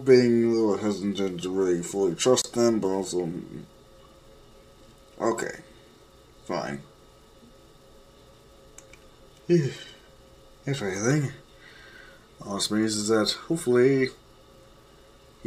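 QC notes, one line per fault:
2.42–2.44 s, gap at a join of encoded pieces. A silence of about 27 ms cuts into continuous sound, then the sound resumes where it stopped. Two separately encoded pieces were joined untrimmed. Encoder start delay and end padding remain. The edges are smeared.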